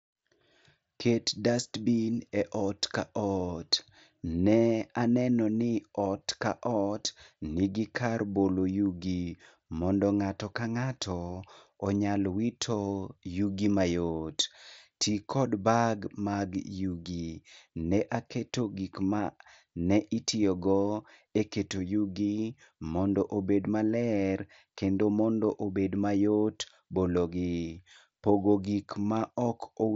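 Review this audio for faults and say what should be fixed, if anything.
No faults found; nothing to fix.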